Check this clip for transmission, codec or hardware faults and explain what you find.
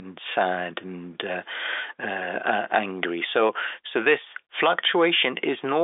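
No transmission, codec or hardware faults are present.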